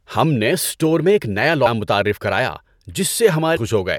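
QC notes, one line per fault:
1.65 s and 3.55–3.58 s, damaged data in a compressed stream: part of the encoded speech stream arrived corrupted, so the decoder could not parse those frames, lost sync and had to hunt for the next valid frame header. This is heard as a short glitch of about 20 ms each time, before clean decoding resumes.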